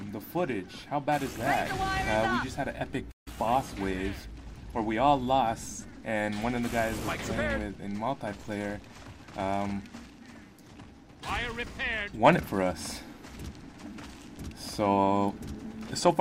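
At 3.11 s the player most likely ran short of buffered data or had its output thread held up, so nothing reached the output until it caught up at about 3.28 s. This playback stall cuts the sound off abruptly in mid-flow, leaving a gap of silence of around 146 ms that is clearly audible as a hiccup. The sound then resumes just as suddenly once output restarts.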